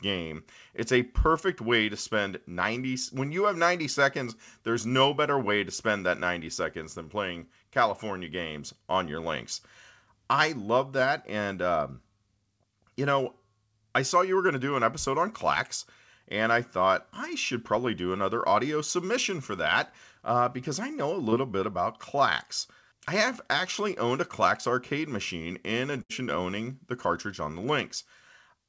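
At 21.30 to 21.34 s, between "because I know a" and "bit about", there is a short concealed packet loss. About 20 ms of audio arrived too late for the decoder, and the receiver bridged the hole by extending the sound just before it, then crossfaded back into real audio. It comes across as a tiny smear or wobble rather than an audible gap, which is what separates it from the longer loss later.

At 26.02 to 26.11 s, after "arcade machine in" and before "to owning the cartridge", a burst of packet loss removes about 80 ms. The receiver stretched the preceding sound over roughly 72 ms while fading it down, so the filled stretch decays away before speech resumes further along. Unlike the earlier smear, this one is long enough to skip audio outright. Throughout, the call path's band limit leaves nothing above 8 kHz.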